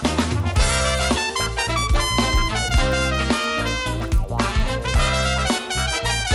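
A resampler restarted on every block, converting 24 kHz to 48 kHz in separate 20 ms chunks, leaves an error at each block edge that is heard as a 50 Hz buzz under the audio.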